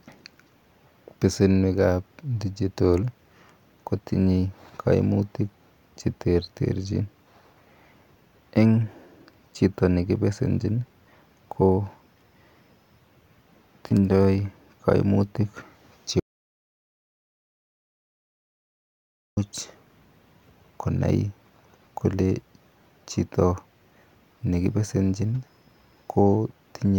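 At 16.2 s the speech cuts out in an audio dropout to silence lasting about 3.17 s, until 19.37 s, with no room tone at all. The input was likely lost while recording continued. The waveform shows a flat line, the spectrogram a fully blank band.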